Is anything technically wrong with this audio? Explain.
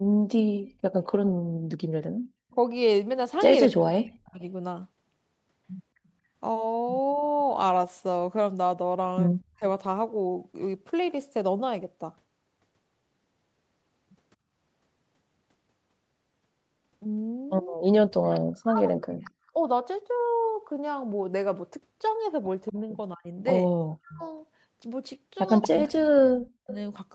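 Yes, there are two related problems, both typical of a speakerphone call where the far end's echo cancelling isn't keeping up.

Echo leak shows up four times: a brief blip at 2.51 to 2.55 s, then 7.23 to 9.45 s, 17.88 to 19.31 s and 22.66 to 26.74 s. Each time you hear a delayed copy of the speech trailing it by 233 ms. The likely cause is that the loudspeaker sound reaching the other side's microphone wasn't fully cancelled and got sent back. Early on it's very faint, but it gets louder over the clip, and in the last stretch it sits only around 10 dB under the main speech.

Speech suppressed in double talk hits at 3.67 to 4.42 s, 9.57 to 9.63 s, 17.76 to 19.58 s and 22.72 to 26.68 s. The speech dips sharply or drops out in chunks, mostly very deep cuts, though the short one near 9.6 s is shallower. The likely cause is the echo canceller misreading both sides talking at once as echo and ducking everything. 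The last two overlap the echo bursts, so you get dropouts and echo together.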